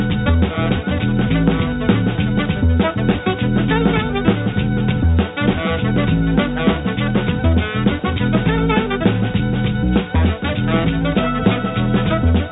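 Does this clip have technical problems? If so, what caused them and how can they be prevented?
No, nothing in this audio stood out as a technical problem on listening, so there is nothing here that calls for prevention.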